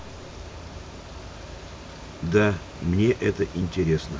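Nothing here needs pointing out: the speech runs along without a single technical fault anywhere in the clip.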